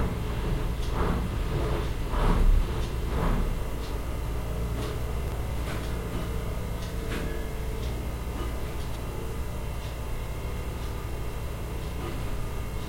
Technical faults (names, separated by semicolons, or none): chunks out of order